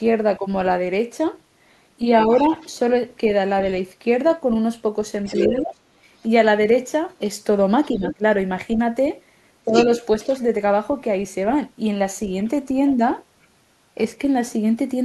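From 2.25 to 2.51 s the talker's level sags slightly, by about 5 dB, while a faint second voice sits well underneath from 2.31 to 2.78 s, about 25 dB down. These are the two faults that recur through the clip.

The dip is speech suppressed in double talk. When both sides speak at once, the echo canceller likely cannot tell the near talker from the loudspeaker echo, so it turns everything down. It does so harder later: about 20 dB from 5.46 to 5.79 s and from 7.97 to 8.22 s. It dips again by about 10 dB from 9.66 to 10.29 s.

The second voice is the other side's voice leaking through. It is heard from 5.25 to 5.44 s at about 10 dB below the talker and from 7.94 to 8.15 s at about 15 dB below. It is strongest from 9.68 to 10.42 s, nearly as loud as the talker. This is likely loudspeaker playback reaching the microphone that the canceller failed to remove.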